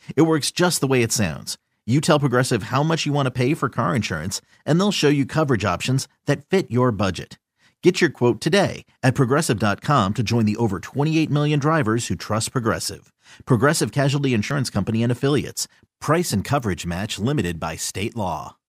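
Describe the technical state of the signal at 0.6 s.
At 0.58 s the speech jumps abruptly, just before "the way it sounds". No gap of silence appears. The sound simply skips forward, losing roughly 20 ms. This is most likely a dropped buffer (overrun). The recording software failed to collect a block of samples in time, and the hardware overwrote it. The audio on either side of the missing block is then butted together, producing the jump.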